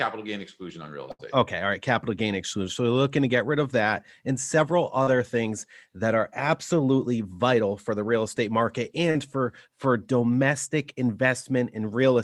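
At 1.11 to 1.22 s, just after "gain exclusion on real", the speech suffers a burst of packet loss. Several consecutive packets failed to arrive in time, leaving about 80 ms missing. The receiver bridged roughly 77 ms of it by extending the last sound and fading it down. This produces a held, dying buzz or hiss, and then the speech picks up further on with that stretch gone.

The clip also has short concealed packet loss, twice. At 5.03 to 5.10 s, between "of that and several" and "things that are absolutely", about 40 ms never reached the decoder. The receiver synthesized around 37 ms from the preceding sound and blended it back. The same happens at 9.11 to 9.18 s, after "the real estate market" and before "for for domestic", with about 38 ms filled. Each is heard as a brief smear or wobble in the speech.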